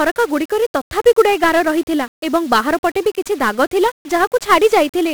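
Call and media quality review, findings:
1-bit DFPWM compression, whole clip. Speech fuzzy and crackly throughout. Dense broadband hiss buries the treble. Heavy codec damage. One up/down bit per sample steers an adaptive level, and the coarse steps leave strong quantisation noise. Fits a 48 kbps stream.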